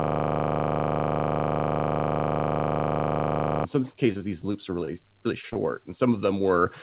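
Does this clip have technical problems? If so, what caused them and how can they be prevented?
Yes. From the very start to 3.65 s there is a system hang loop, already under way when the clip begins. A 40 ms slice of the ring buffer replays exactly about 90 times, giving a rough 25 Hz buzz. Unlike packet loss, every repeat is identical and nothing new gets through. Preventing it means fixing the driver or system freeze so the audio thread keeps refilling the buffer, with a watchdog that mutes output if it stalls.

From 4.12 to 4.89 s there is repeated packet loss, which gives a choppy, robotic quality. Five gaps, the longest 25 ms, are patched by extending the previous sound, covering about 12% of the stretch. Real audio goes missing between patches, which separates it from a loop or a stall. Better network quality or forward error correction would prevent it.

There are two instances of short concealed packet loss, at 5.41 to 5.45 s and 5.49 to 5.53 s. 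Each drops about 20 ms, and the filled gap comes through as a brief smear or wobble before the real signal resumes. Unlike the busier stretch before it, each is a single isolated hole. Redundancy or FEC on the call would cover such losses.

At 5.53 to 5.57 s there is a short stall from a late packet. The jitter buffer ran dry and the last sound was held about 17 ms too long, then playback continued from the same point. Nothing is lost here, unlike the concealed gaps just before it. A slightly deeper or better-adapting jitter buffer would absorb the delay. All of this passes through a G.711 A-law call path, which removes everything above 4 kHz.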